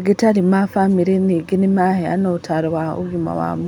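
Speech, with no audible faults.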